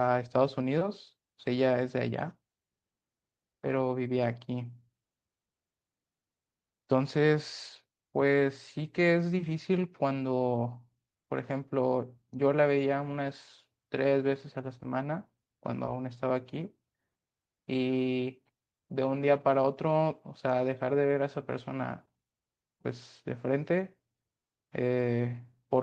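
Nothing in this speech recording stands out as a technical fault at any point, so there's nothing to flag here.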